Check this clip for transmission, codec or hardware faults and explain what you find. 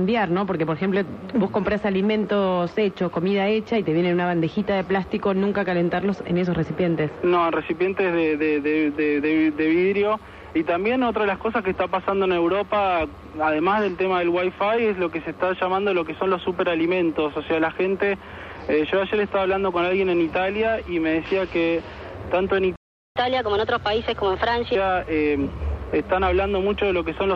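Two playback faults occur back to back near the end, both from the player rather than the recording itself.

Playback stall, 22.76 to 23.16 s: the sound cuts to silence for 0.40 s, likely because the player ran short of buffered data or was blocked, then resumes.

Catch-up at higher speed, 23.16 to 24.75 s: the player resamples its backlog at 1.25 times speed, so the sound runs fast and about four semitones high before dropping back to normal.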